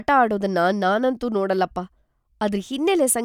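No technical faults can be heard anywhere in the speech; the signal stays continuous and stable throughout, with nothing interrupting or altering it.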